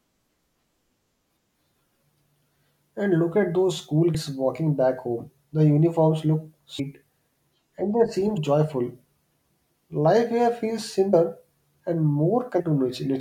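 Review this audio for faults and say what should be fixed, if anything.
The speech has compressed frames skipped at 2.42, 4.14 (between "look at those school" and "walking back home"), 5.44 (right after "walking back home"), 6.78, 8.36 (after "and they seem"), 11.12 and 12.59 s. Each time, whole chunks of the compressed stream never get decoded, so the audio jumps ahead by roughly 150 to 400 ms, in steps that fit a frame of about 23 ms. Check the file's integrity and the transfer path so that damaged frames are caught before decoding.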